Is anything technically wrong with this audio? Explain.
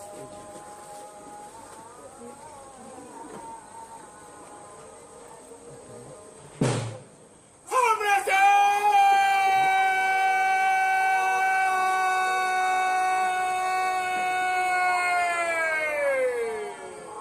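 No, no technical faults found.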